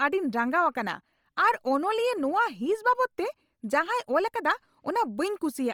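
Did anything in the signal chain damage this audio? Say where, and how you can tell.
Yes, at the codec stage: the audio was likely passed through Bluetooth LC3 compression, and the damage is heavy throughout the speech. The upper spectrum is rebuilt from filled-in noise rather than real detail, giving a breathy, grainy edge, consistent with a low rate near 32 kbps and 10 ms frames, though content still reaches 20.2 kHz.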